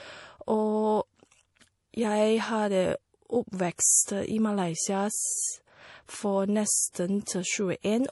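Low-bitrate audio saved at a high bitrate runs through the whole speech clip: nothing sounds above 11.5 kHz, and the dull, smeared top end points to an MP3 encoding near 48 kbit/s, likely later re-saved as high-bitrate MP3, which cannot restore the lost detail.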